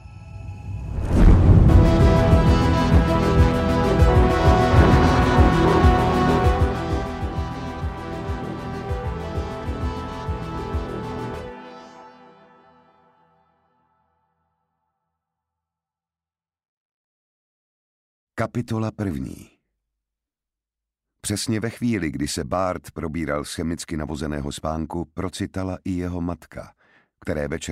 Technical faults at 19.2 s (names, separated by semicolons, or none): none